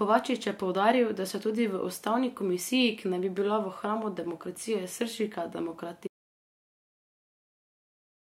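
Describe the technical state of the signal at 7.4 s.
At 7.4 s the signal is in an audio dropout to silence, running from 6.07 s to the end: silence, likely from lost input, with no room tone, unlike a natural pause.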